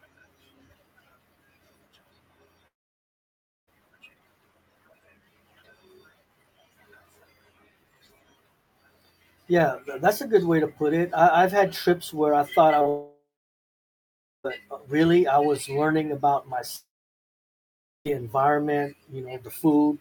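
At 2.67 s the speech cuts out until 3.69 s, a long network dropout, likely from packets not arriving. The last sound gets stretched into a brief fading buzz, then about a second of near silence, and the speech picks up again with that stretch just gone.

Around 12.79 to 12.87 s there are two back-to-back short concealed packet losses, each about 20 ms missing. The receiver papers over them by extending the preceding sound, so you hear a quick smeary wobble rather than a clean gap.

Straight after, 12.89 to 14.46 s drops out the same way, with roughly 1.2 s of dead air. Another dropout runs 16.76 to 18.07 s, again a short fading tail, then silence before the speech resumes past the lost part.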